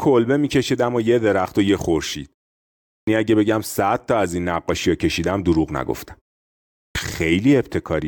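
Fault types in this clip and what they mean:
Clipped start after a pause: the output path drops into an idle state during silence and takes time to resume, so the first 190 ms at 2.88 s and 180 ms at 6.77 s are lost, each after a pause of about 0.6 s, and speech begins abruptly.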